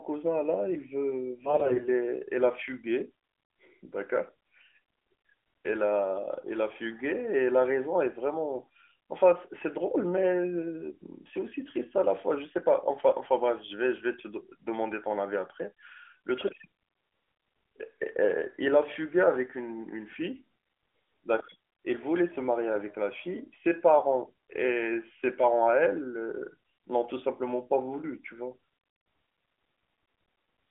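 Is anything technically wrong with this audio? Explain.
Yes. From 1.44 to 1.88 s there are AMR bit errors on this narrowband AMR-NB speech. Roughly 15 percent of the weakly protected bits in each frame arrive flipped, scattering excitation pulses and skewing fine pitch, gain and spectral values. Pitch and loudness hold, but the speech turns hoarse and gargly. Lost packets would instead leave gaps or smeared repeats.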